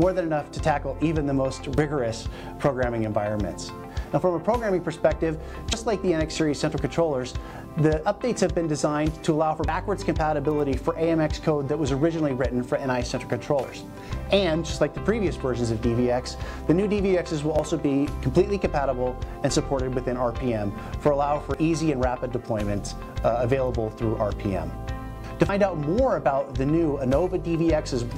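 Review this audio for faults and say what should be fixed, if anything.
Audio missing between chunks at 1.78, 5.73, 9.68, 17.59, 21.54 and 25.49 s: brief skips of roughly 50 ms where the sound jumps straight ahead with no silence. They recur about every four seconds, likely because samples are dropped each time one block closes and the next opens. Capturing into overlapping or double-buffered blocks, so the next one is already recording before the previous one closes, would prevent these gaps.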